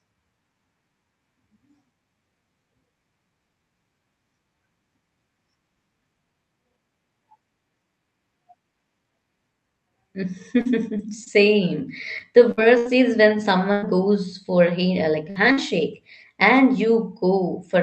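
From 10.19 to 13.84 s the speech turns choppy and robotic, a sign of repeated packet loss. Seven short holes, the longest 98 ms, cut about 320 ms from the stretch. The receiver patches each by extending the preceding sound, around 150 ms of it synthesised, which gives the robotic texture.

At 15.16 s a lost packet rebuilt from error correction passes without a gap, but the 20 ms frame comes from a low-bitrate copy carried in the following packet, so it sounds briefly rougher and noisier. The audio is band-limited at 8 kHz, consistent with a wideband Opus call.

From 15.30 to 15.38 s a burst of packet loss removes about 60 ms. Roughly 55 ms of the last sound is continued and faded before playback resumes further on. Three more FEC-rebuilt frames follow at 15.36, 15.44 and 15.57 s, each a brief rough patch.

A second burst of packet loss from 15.52 to 15.59 s drops another 60 ms, again bridged by about 52 ms of fading continuation.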